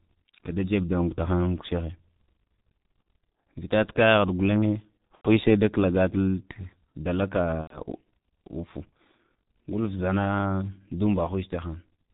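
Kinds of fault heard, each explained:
G.723.1 codec: A low-rate internet-telephony codec, heavily applied, consistent with 6.3 kbit/s. Speech sounds muffled, hoarse, with nothing above 4 kHz.
VoIP packet loss concealed by the speech codec: Lost packets near 5.15 s, before "she da", and 7.61 s were guessed from earlier sound. Speech is stretched and fades.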